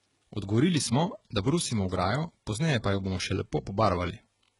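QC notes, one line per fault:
Throughout: HE-AAC compression, heavy. Nothing comes through above 11.1 kHz, and the top end of the speech has that bright but fake quality: sibilants come out gritty and a bit lispy, with a metallic edge. That's likely a low-bitrate HE-AAC encode, fitting something around 12 kbps, where only the lower spectrum is really coded and the treble is rebuilt by copying lower bands upward, so its harmonics don't line up with the real ones below.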